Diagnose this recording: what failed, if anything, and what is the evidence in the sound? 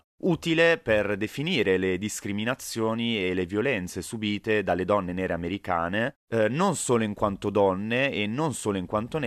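Nothing failed; no faults found.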